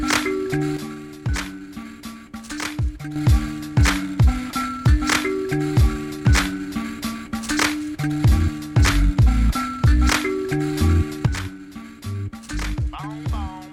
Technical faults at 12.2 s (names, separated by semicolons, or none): sudden gain jump